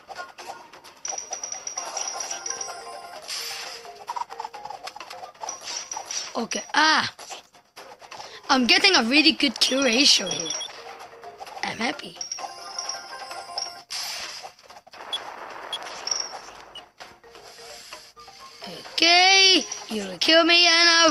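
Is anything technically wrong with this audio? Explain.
No, nothing stood out as technically wrong on listening.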